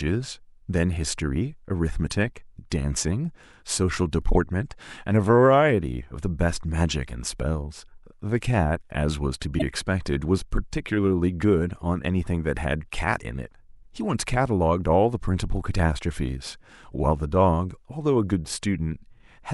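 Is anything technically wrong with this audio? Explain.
Yes. At 9.58 to 9.62 s the speech is broken by a loud chirp, squeak or burst of noise spanning about two frames, and at 16.94 s a much fainter single-frame glitch appears. Both come from a corrupt frame decoded: flipped bits scrambled gains and codes, misplacing energy across frequencies.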